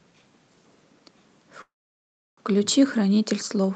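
At 1.61 s the speech stops and a call audio freeze begins. It lasts until 2.39 s. A brief fading buzz or hiss carries the last sound on, then about 0.69 s of near silence follows. The speech then resumes where it left off, with nothing lost, now running about 0.76 s late. The likely cause is delayed packets draining the jitter buffer. The Opus call path caps the audio near 8 kHz.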